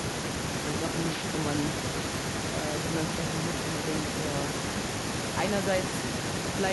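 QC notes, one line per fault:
0.00–0.53 s, speech suppressed in double talk: the echo canceller likely mistook overlapping talk for echo and turned everything down, so the speech dips by about 25 dB at its deepest.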